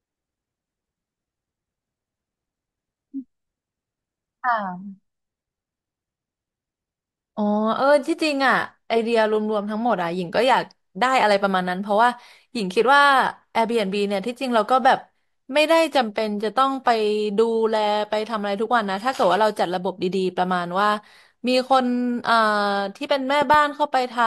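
At 23.42 to 23.56 s a loud pop strikes twice in quick succession, roughly 10 dB above the speech, which continues underneath. It is likely a voltage spike from a plug, switch or static discharge. The waveform shows two tall spikes, and the spectrogram shows two thin full-band vertical lines.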